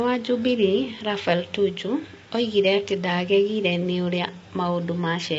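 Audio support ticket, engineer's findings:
Rough, grainy speech throughout; noise between harmonics, nothing above 7.8 kHz. Likely low-delay AAC compression (AAC-ELD): short frames smear pitch harmonics; fits a 24 kbps stream.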